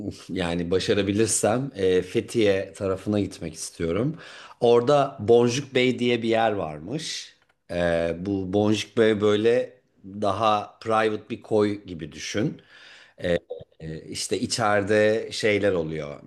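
No technical faults are audible.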